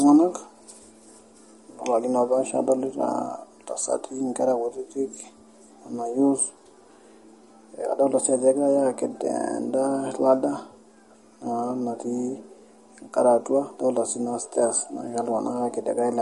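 From start to finish the speech carries plainly audible MP3 compression damage. The encoder was starved of bits, which likely points to a rate near 48 kbps. It dropped weak frequency lines and they flicker in and out between frames. The result is a watery, swirling texture, metallic chirps on s sounds, and softened, smeared attacks.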